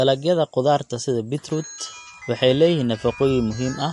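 From start to finish the speech has nothing above 11.3 kHz and a plainly audible swirly, watery texture, which is likely MP3 compression. The encoder ran short of bits, so it chopped off the treble at a fixed point and dropped quieter frequency detail, letting it blink in and out between frames. The result is a dull top end with a warbling shimmer on the speech, which fits a starved encode at around 48 kbps.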